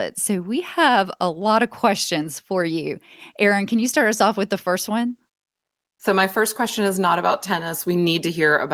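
Comfort noise in place of the background runs from 5.47 to 5.99 s. For about half a second the real background gives way to a steady, featureless hiss roughly 22 dB quieter. The likely cause is a sender pausing transmission during silence, as Opus DTX does, while the receiver synthesises filler noise.

An onset clipped by the voice detector follows at 5.96 to 5.99 s. The first 30 ms of the returning speech are missing, so it begins abruptly without its soft lead-in, likely because the voice detector reacted late and those moments were never sent.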